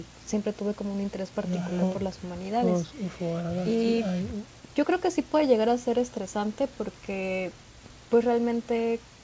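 Nothing goes wrong anywhere in this speech recording, which simply carries the ordinary sound of a wideband call with nothing above 8 kHz.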